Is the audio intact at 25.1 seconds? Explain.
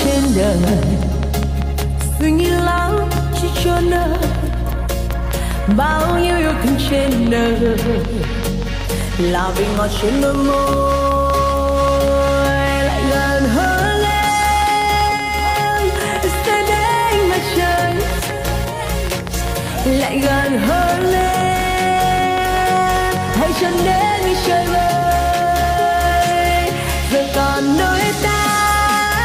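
Yes, at 25.1 seconds the audio plays through intact, with no dropout, click, distortion or other fault to be heard.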